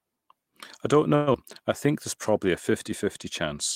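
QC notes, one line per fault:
1.15–1.36 s, long network dropout: right after "I don't" the sound smears into a fading buzz for about 0.19 s, likely from packets lost in transit.
1.87–3.20 s, jitter buffer slow-down: sound drags at 95% speed, same pitch, drawn out; repeated pitch periods added about 69 ms to rebuild buffer reserve.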